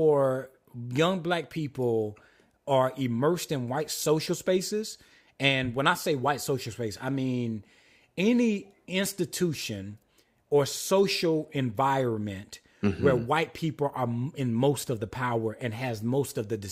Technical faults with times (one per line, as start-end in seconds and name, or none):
none